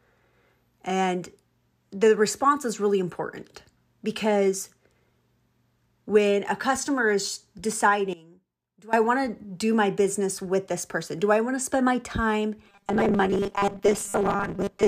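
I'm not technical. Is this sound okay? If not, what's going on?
No. Two problems stand out. From 8.13 to 8.93 s, just before "I want", the speech suddenly drops to a faint whisper. This is one channel inverted. The likely cause is one side of the stereo flipped upside down, so both sides cancel when combined.

From 12.65 s to the end, right after "to spend my time", the speech turns into a metallic, robotic buzz. This is robotic sound from repeated short buffers. The likely cause is tiny scraps of audio, about 5 ms each, being replayed while roughly half the real sound is skipped. That forces a steady 200 Hz hum onto the speech.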